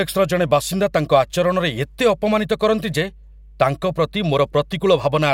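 A speech recording with mains hum running from start to finish. A steady low tone sits under the voice at 50 Hz, the European power-line frequency. It is fairly prominent, roughly 25 dB below the speech. The tone never changes pitch or level. That steadiness points to power leaking into the signal path, through a ground loop between connected devices or a transformer near the cabling.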